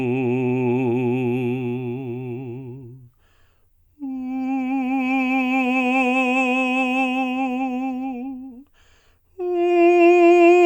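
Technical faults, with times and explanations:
No technical faults are audible anywhere in this music clip.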